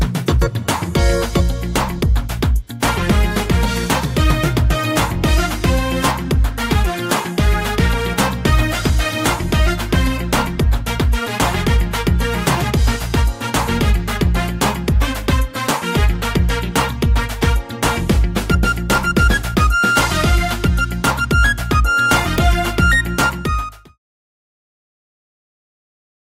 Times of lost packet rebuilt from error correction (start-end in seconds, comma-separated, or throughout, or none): none